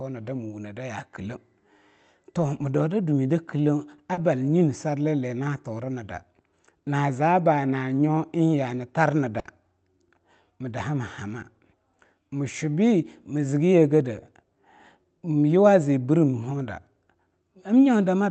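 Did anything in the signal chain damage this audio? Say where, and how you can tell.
Yes. In the network stage, about 40 ms of packets went missing at 4.13 s. The decoder concealed the gap by extending the preceding speech, leaving a brief smear.

A burst of packet loss at 9.39 to 9.47 s, just after "yaa hani", dropped about 60 ms. The receiver held and faded the last sound, then resumed with that stretch gone.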